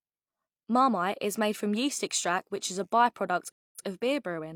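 At 3.52 s a stream reconnect silences the speech for 226 ms. It then resumes 85 ms earlier and repeats a fragment, which a plain dropout would not.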